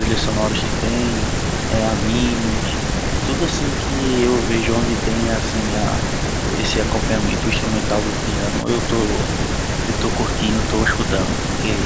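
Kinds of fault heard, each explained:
No faults can be heard in this speech recording.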